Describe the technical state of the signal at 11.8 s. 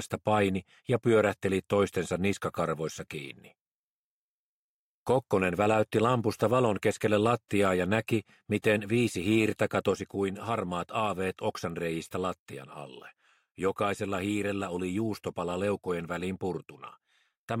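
At 11.8 s the level sits about 4 dB lower after a sudden gain jump at 9.92 s. It likely comes from an unramped digital gain change, dropping sound and background noise together.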